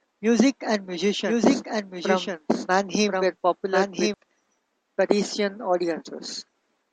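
From 1.26 s to 4.14 s, a doubled audio track appears. A second copy of the speech trails about a second behind, a few decibels quieter. It is dry and full-band. It starts and stops abruptly. A slower second capture path is the likely cause.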